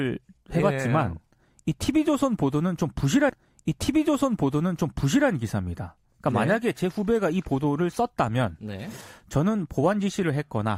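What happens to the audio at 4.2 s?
At 4.2 s the speech is inside a stream segment repeat running from 3.29 to 5.29 s: the player queued the same segment twice, so 2 s of the programme plays again, with a small blip where playback jumps back.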